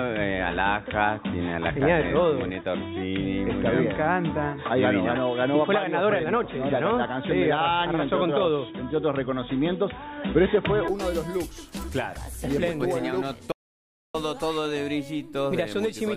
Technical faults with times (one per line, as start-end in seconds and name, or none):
0.00-10.88 input switched to a poorer device
13.52-14.14 audio dropout to silence